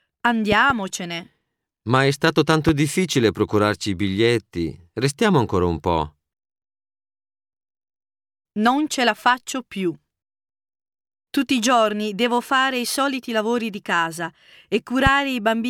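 A speech recording with three loud pops riding over the talking: a double pop between 0.52 and 0.72 s, then single pops at 2.69–2.71 s and 15.07–15.09 s, peaking roughly 10, 15 and 10 dB above the speech. They are likely voltage transients from a plug, switch, static or driver glitch. On a waveform each shows as a tall isolated spike; on a spectrogram, a thin full-band vertical stripe with speech continuing underneath.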